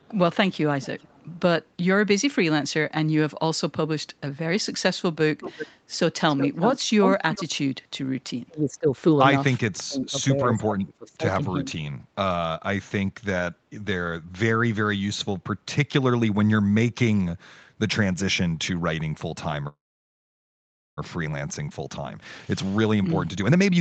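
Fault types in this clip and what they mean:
Echo leak: A delayed copy of the speech, about 0.39 s behind, sits under the opening 1.4 s at about 25 dB down and returns near 5.4 s at about 10 dB down. The likely cause is a loudspeaker echo the far end's canceller missed. Unlike reverberation, it is a distinct repeat.
Speech suppressed in double talk: The speech dips by roughly 30 dB from 8.47 to 8.87 s, then by roughly 25 dB over about a second between 9.6 and 11.25 s. This is likely an echo canceller clamping down while both sides talked. Unlike a freeze, it attenuates sound rather than stopping it.
Call audio freeze: At 19.67 s the audio halts for about 1.3 s, nearly all of it silent, then resumes exactly where it stopped with nothing lost. The likely cause is packets held up until the jitter buffer ran dry. Unlike suppression, it inserts a pause and removes no sound.
Jitter buffer speed-up: From 21.70 s to the end the speech runs at about 121% speed with unchanged pitch, shedding roughly 0.4 s as the receiver trims pitch-period slices to drain excess buffered delay. 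It differs from a freeze in that time is removed rather than added.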